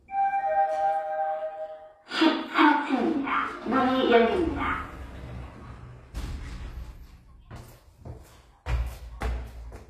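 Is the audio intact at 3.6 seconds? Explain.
No. Throughout the clip, including 3.6 s, nothing sounds above 14.9 kHz, likely low-bitrate audio saved at a high bitrate: the earlier encoder's losses survive re-encoding.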